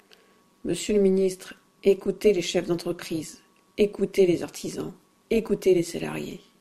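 Overlap-add ripple throughout this speech: rejoined frames overlap without constant gain, so level swings about 6 dB roughly 200 times a second, a metallic buzz.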